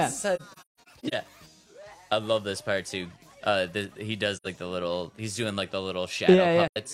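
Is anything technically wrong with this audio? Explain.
Yes. There is AAC frame loss with muting. It hits three spots. From 0.36 to 1.14 s, about 384 ms goes missing in scattered gaps, the longest around 150 ms. Shorter holes follow at 4.36–4.47 s and 6.68–6.77 s, each about 85 ms. The decoder zeroes each lost frame's spectrum. Overlapping windows then fade the sound out and back in, so each dropout is a soft-edged silence.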